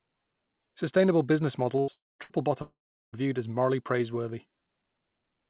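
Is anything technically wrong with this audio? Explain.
Yes. The speech breaks up several times between 1.80 and 3.16 s, heard through a narrow call-type sound with nothing above 4 kHz, which points to G.711 A-law coding.

Burst of packet loss at 1.80–1.91 s and 2.23–2.33 s: a run of packets, about 80 ms each time, never arrived in time. The receiver stretched the last sound for roughly 70–76 ms as a fading buzz or hiss, then the speech jumps ahead with that piece gone.

Long network dropout at 1.92–2.22 s and 2.62–3.16 s: the sound is held as a decaying buzz or hiss, then falls silent, for about 200 ms in the first gap and 360 ms in the second, the second resuming at "viewed as morally praiseworthy." About 280 ms and 520 ms of speech are missing, likely because the network delivered no audio for those stretches.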